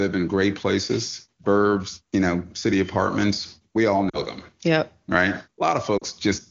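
Lost AMR speech frames at 4.09 to 4.20 s and again at 5.97 to 6.03 s: each is a brief drop to near silence of about 40 ms, which fits two corrupted frames that the wideband decoder covered by repeating its last pitch and vocal tract settings at falling gain.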